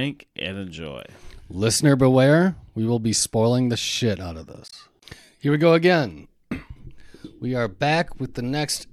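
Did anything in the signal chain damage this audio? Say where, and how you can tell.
Yes, there's damaged data in the compressed stream at storage or codec level. Right after "the shit out of", from 4.68 to 4.73 s, there's a short glitch: the decoder hit corrupt bytes, lost frame sync and jumped to the next header.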